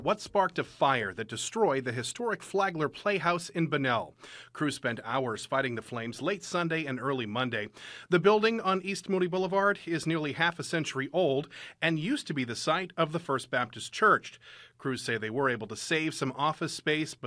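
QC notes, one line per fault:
No faults heard anywhere in this speech clip.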